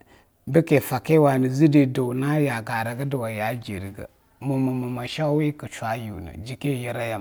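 A speech recording with no technical faults to report. Nothing audible in it points to a problem in how the sound was captured or carried.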